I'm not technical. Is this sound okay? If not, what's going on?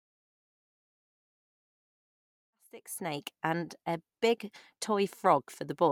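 Yes, the speech recording is technically sound, with the level rising gently in a smooth fade-in from around 2.5 seconds until it reaches full volume at 3.4 seconds, just as an editor would shape it.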